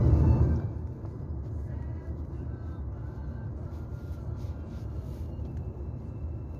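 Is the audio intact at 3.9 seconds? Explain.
Yes, the audio is intact at 3.9 seconds, with no fault at that moment.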